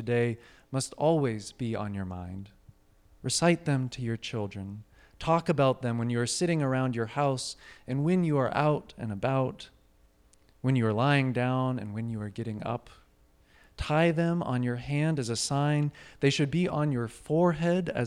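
No technical faults can be heard anywhere in this speech recording. Nothing in the audio calls for a time mark or a description of a problem.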